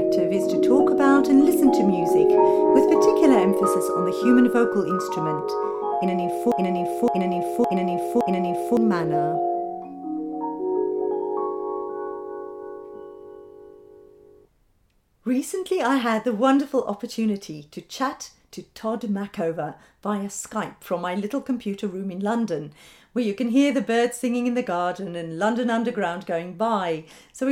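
From 6.52 to 8.77 s a broken-record loop takes over: a 0.56 s fragment repeats exactly four times, back to back, and the audio due in that span never plays. Likely the player or stream stalled. Spectrogram and waveform show identical tiles.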